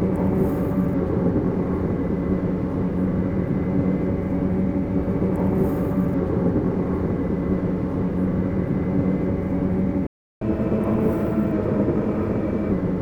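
A recording of everyday sounds, with a playback stall at 10.07 s: the player most likely ran out of buffered data or had its output thread blocked, so the audio cuts to silence for about 0.35 s before resuming where it left off. The player then recovers with catch-up at higher speed from 10.42 s to 12.72 s, resampling its backlog at 1.15 times normal rate. Everything runs faster and sits roughly two semitones sharp before dropping back to normal speed and pitch.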